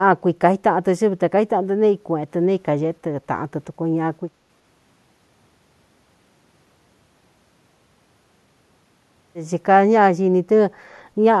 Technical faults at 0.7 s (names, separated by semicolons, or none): speech suppressed in double talk